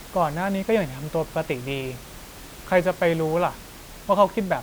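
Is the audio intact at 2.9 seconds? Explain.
Yes, the audio is intact at 2.9 seconds; the only thing audible under the speech there is the room's own background noise, about 20 dB lower, which belongs to the recording.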